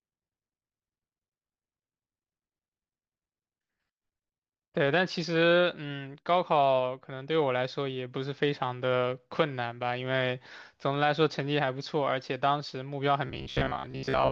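Speech, with robotic sound from repeated short buffers from 13.27 s to 14.31 s, the end of the clip. Most of the audio there is replaced by loops, imposing a rigid 66.8 Hz metallic buzz. This is likely a repeated segment of about 15 ms filling gaps left by late-arriving audio.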